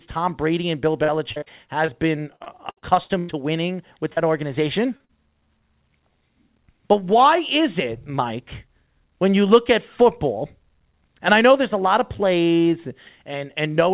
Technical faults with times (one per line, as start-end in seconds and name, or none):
1.04-1.48 repeated packet loss (robotic sound)
1.86-1.90 short concealed packet loss
2.36-3.31 repeated packet loss (robotic sound)
4.13-4.19 short concealed packet loss
4.97-5.11 short concealed packet loss